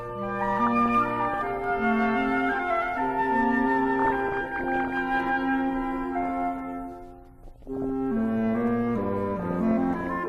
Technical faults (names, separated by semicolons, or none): DAB burbling